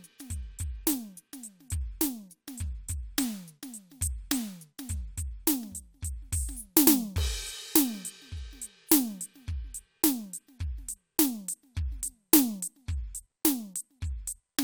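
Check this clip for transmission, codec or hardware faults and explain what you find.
No faults turn up anywhere in this music clip.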